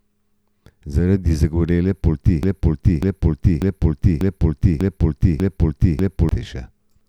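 At 2.43 s the speech locks into a broken-record loop: a fragment about 0.59 s long plays back to back seven times, identical each pass, until 6.29 s. That gives nearly four seconds of the same stutter, and whatever should have been heard in that span never arrives. The likely cause is a stalled player, encoder or stream that kept re-sending the last piece of audio it held.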